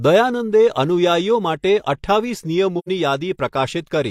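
At 2.78 s the speech fades into a brief silence and fades back by 2.89 s: AAC frame loss with muting. The decoder lost compressed data, about 85 ms of audio, which fits two lost frames, and filled the gap with a zeroed spectrum. The overlapping transform windows taper the sound down and up around the hole. That soft edge is what separates it from a hard dropout or sample-level gap, which cuts off abruptly.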